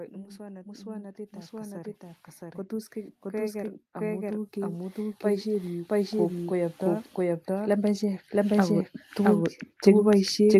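A doubled audio track runs through the whole clip: an equally loud, dry, full-band copy of the speech trails the original by roughly 0.7 s, likely from a second, slower capture path.

Automatic gain rising begins at 0.13 s and continues to the end, as the gain control raises its gain steadily, so speech and background swell together.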